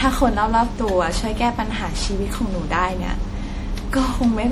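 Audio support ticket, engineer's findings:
Generation loss, throughout: swirly, hollow, smeared speech with blurred attacks. Likely repeated MP3 re-encoding, around seven passes consistent with 64 kbit/s, each requantising on a shifted frame grid.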